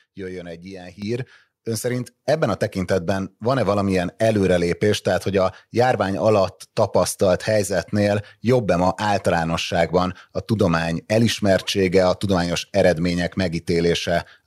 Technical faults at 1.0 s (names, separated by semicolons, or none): microphone volume stepped up